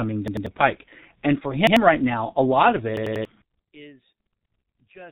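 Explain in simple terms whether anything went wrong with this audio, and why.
Several things went wrong here.

The whole clip has passed through the G.723.1 codec, an old internet-phone format. It keeps nothing above about 3.8 kHz, so the speech sounds muffled. The codec rebuilds the voice from a rough model that updates slowly. Here that damage is heavy. The voice comes out hoarse. Consonants smear together, so crisp sounds like s and t lose their edges.

There are three spots with a repeated buffer. New audio arrived late, so the player replayed its last chunk instead. Each chunk lasts about 93 ms, which fits a 4096-sample buffer. From 0.28 to 0.46 s, just before "the pike", one chunk plays twice more. From 1.67 to 1.77 s, before "right now a lot", it repeats once. From 2.97 to 3.25 s, after "now a lot of", it repeats three times. Each repeat sounds like a quick stutter with a hard join. 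Some real speech is skipped each time, from roughly a tenth to three tenths of a second.

From 3.42 s to the end, the sound suddenly drops to a faint trace. The likely cause is one channel inverted. One side of the stereo signal was flipped upside down. When the two sides are mixed into one, the matching parts cancel. The centred voice nearly disappears. Only the small differences between the two sides remain.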